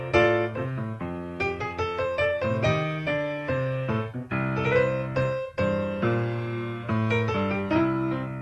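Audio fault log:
No faults are present; the signal comes through the WebRTC call path intact, its high end rolling off near 12 kHz in a way that fits an Opus stream at around 40 kbps.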